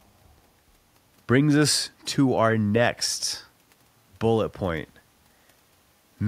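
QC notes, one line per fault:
No fault found in this speech clip.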